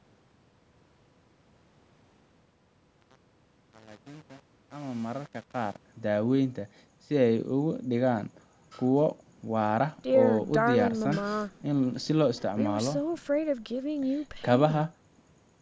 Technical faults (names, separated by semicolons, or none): truncation distortion on a fade